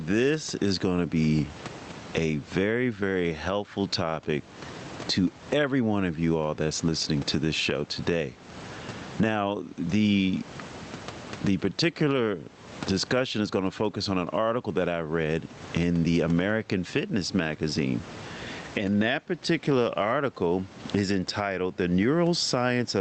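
Gain pumping runs through the whole speech clip. The level breathes by around 20 dB, with room noise sitting about 33 dB under the speech. Loud and quiet passages land closer in level, giving a squashed, flattened sound. This is likely from input gain set far too high and a fast limiter clamping it on every peak. The call codec path's top end stops at 8 kHz.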